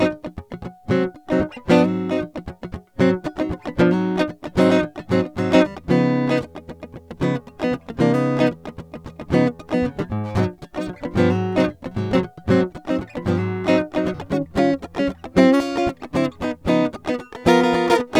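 Nothing technical goes wrong anywhere in this piece of music; there's simply no moment where the sound falters or breaks.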